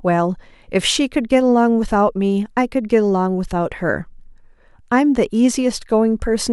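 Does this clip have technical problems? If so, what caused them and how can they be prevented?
No, nothing technical goes wrong anywhere in this speech clip, so there's nothing here to fix or guard against.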